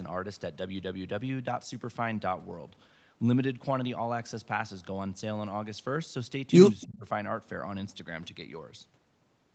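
A speech recording with two brief call-processing faults. From 6.81 to 6.86 s there is an echo leak: a faint, delayed copy of the voice, roughly 300 ms behind and far quieter than the speech. This is likely loudspeaker sound that the far end's echo canceller failed to remove. Right after, from 6.85 to 7.05 s, the voice sinks by around 20 dB for about a fifth of a second. That is speech suppressed in double talk. The canceller, likely caught with both sides active, turned down the talker along with the echo.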